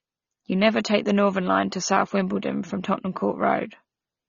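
From start to finish, the speech sounds dull and band-limited, with nothing above 6.9 kHz. Sibilants come out fizzy and smeared. The likely cause is AAC compression. The encoder discards the top bands and coarsely quantises what remains, which fits a low bitrate near 24 kbps.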